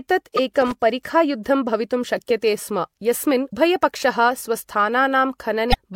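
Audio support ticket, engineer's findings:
Damaged data in the compressed stream: corrupted frames throw the decoder out of sync, and it skips ahead to the next frame header. Short chirp or squawk at 0.37–0.39 s, 3.49–3.53 s and 5.70–5.75 s.

Loose connector crackle: a worn or dirty contact in the analogue path makes and breaks rapidly, chopping the signal. Irregular bursts of scratchy crackle at 0.61–0.75 s and 4.63–4.73 s. Check and reseat the cable and jack.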